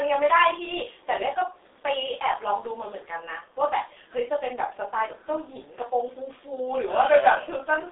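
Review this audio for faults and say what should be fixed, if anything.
The whole clip carries G.723.1 codec damage: nothing above about 3.8 kHz, a 300 Hz to 3.7 kHz telephone band, and a hoarse, smeared quality suited to roughly 6 kbit/s coding. Unlike simple low-pass filtering, consonants blur because the coarse voice model updates slowly. Route the call through a wideband codec at a higher bitrate instead.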